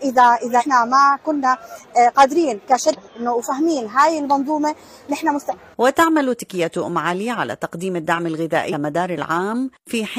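Four short bursts of damaged data in a compressed stream occur at 0.56 to 0.63 s, 2.93 to 3.00 s, 5.48 to 5.54 s and 8.69 to 8.74 s, each roughly 50 to 70 ms long. Corrupted bytes make the decoder misread those frames and lose sync until the next frame header, producing a brief chirp or squawk. On a spectrogram each is a narrow vertical smear of broadband energy. On the waveform it is a jagged discontinuity.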